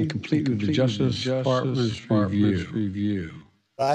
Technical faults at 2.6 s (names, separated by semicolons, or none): doubled audio track; time-stretched section